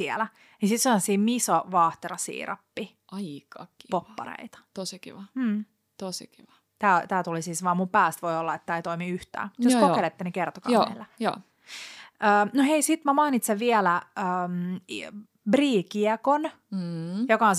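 Nothing stood out as a technical problem on listening to the speech in this clip.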